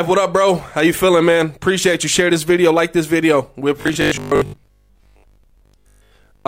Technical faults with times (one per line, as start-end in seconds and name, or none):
3.82-6.47 robotic sound from repeated short buffers